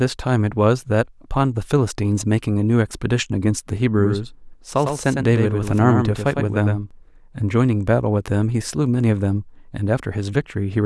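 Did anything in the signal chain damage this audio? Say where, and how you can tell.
Yes. From about 3.99 s to 6.91 s the speech plays twice. A second copy trails the original by roughly a tenth of a second at about 5 dB lower. It's a doubled audio track, not an echo, because the copy is full-band with no decay or room colour, and it cuts in and out abruptly at those two points. The likely cause is the same signal being captured a second time through a slower driver or buffer path and mixed back in.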